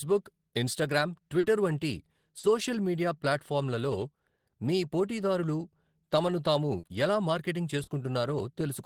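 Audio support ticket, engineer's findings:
Short concealed packet loss at 1.39–1.46, 2.39–2.46, 6.79–6.86 and 7.83–7.90 s: 40 ms missing each time, decoder concealment extrapolates the preceding speech, giving brief smears or wobbles.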